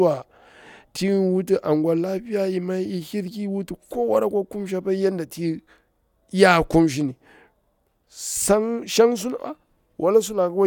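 No technical faults can be heard anywhere in the speech recording; the signal stays continuous and intact throughout.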